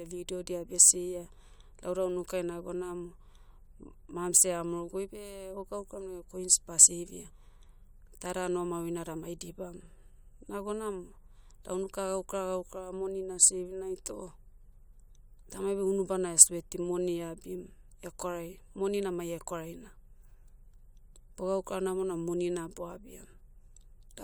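No technical faults can be heard anywhere in the recording.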